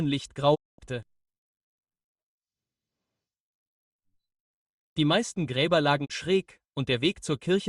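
A digital broadcast dropout mutes the sound from 0.54 to 0.80 s, then again from 6.04 to 6.12 s. Each time the receiver stopped getting valid frames and silenced its output, with a quick 20 ms fade, until clean data resumed. The first hole, about a quarter-second, fits roughly seven lost frames; the second, a brief blip, fits one. Whatever was broadcast during those gaps is missing.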